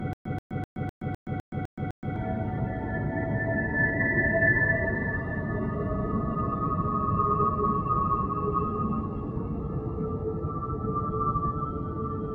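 From the very first instant until 2.16 s, a short fragment of about 131 ms plays, cuts to dead digital silence for about 122 ms, then plays again, repeating on a steady 254 ms cycle, roughly four times a second, eight times in all. This is a stutter with silent gaps, already under way when the clip begins. The likely cause is a stalled player or stream replaying its last buffered fragment on each retry and then running dry, so the audio meant for those two seconds never arrives.

Throughout the clip, sustained parts of the sound and its decaying tails keep sinking while attacks mostly come through, giving a pumping, fluttering, thinned-out quality with level swings of around 5 dB. This is a noise suppressor applied to music or sounds. A suppressor designed for speech treats steady tones, ambience and reverb as background noise and pulls them down, so held material and tails are repeatedly ducked rather than left to ring.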